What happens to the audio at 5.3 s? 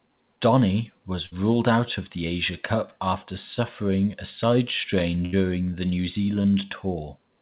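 A burst of packet loss hits the speech from 5.25 to 5.34 s. A short run of packets never arrived in time to be played. The receiver covers the gap by carrying the last sound forward for about 70 ms, turning it down as it goes. That concealment is heard as a stretched, fading tail of the previous sound. The speech then picks up again, but about 80 ms of it has been skipped, all within the call's 4 kHz band.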